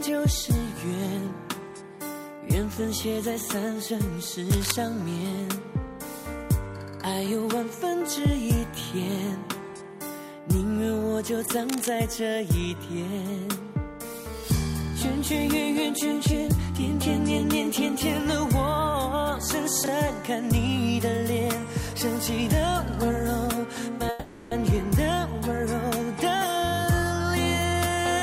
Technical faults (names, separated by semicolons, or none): cable scratch noise; chunks out of order; call audio freeze; jitter buffer speed-up